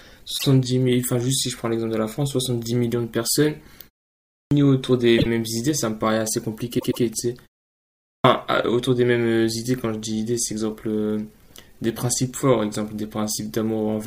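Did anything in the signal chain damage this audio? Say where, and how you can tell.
Yes. Repeated frames, at the codec or storage stage, cause a stutter at 0.37 s, 5.17 s and 6.78 to 7.02 s. The first two replay a 24 ms block, once and then twice. The third replays a 120 ms block twice, which fits a run of 24 ms compressed frames. Unlike an underrun, which leaves a gap, the sound is duplicated, and the clip grows by the repeated time, about 310 ms in all.

A clipped start after a pause, at playback, is heard at 4.15 s and 7.85 s. After about 0.34 s and 0.46 s of quiet, speech begins abruptly, missing roughly 0.36 s and 0.39 s of its opening. The output device has gone idle and loses that time waking and locking. Muting in pauses differs because it returns in time, with only background lost. Here the onset itself is swallowed, which sets this fault apart.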